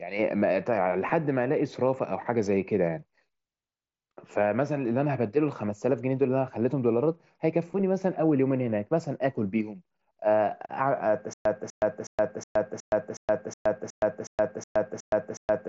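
The playback most likely stalled at 11.33 s in this speech clip and kept retrying until the end, giving a stutter with silent gaps. A 247 ms fragment repeats twelve times, each followed by about 120 ms of digital silence, roughly every 367 ms. The audio that should have played is lost, all through a light mSBC Bluetooth headset path with nothing above about 7.7 kHz.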